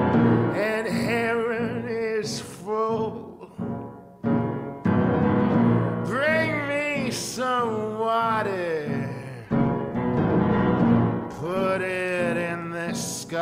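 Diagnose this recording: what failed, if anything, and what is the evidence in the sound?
A call bitrate drop occurred at the codec stage, triggered by a fall in the call's bandwidth estimate. From 9.44 s to 11.73 s the encoder was starved of bits, and the sound points to a drop from roughly 64 kbps to about 14 kbps, held at its lowest for about 2.2 s. With so few bits, the codec quantises the signal coarsely and gives up the upper band. The audio turns rough, watery and muffled until the bitrate recovers near 11.73 s.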